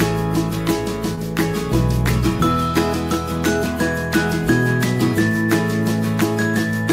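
At 1.15 to 1.19 s there is a short concealed packet loss: about 20 ms of audio failed to arrive in time, and the decoder bridged the gap by extending the preceding signal before blending back, heard as a brief smear or wobble.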